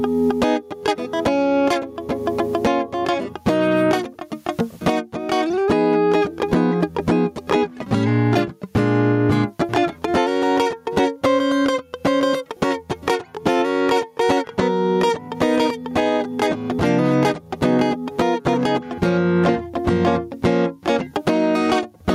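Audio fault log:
Throughout, gain pumping: a breathing gain swing of around 20 dB, with loud and soft passages squashed close together. The likely cause is input gain set far too high, with a fast limiter clamping down on every peak. Unlike a noise gate, which shuts the gaps to silence, here the dips follow the music's own peaks.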